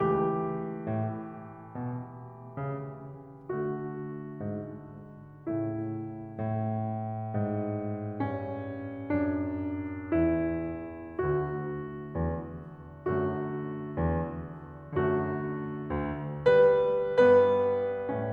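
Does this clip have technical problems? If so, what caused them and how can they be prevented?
No, the music comes through as a steady, intact signal with no audible technical faults, so there is nothing here that needs preventing.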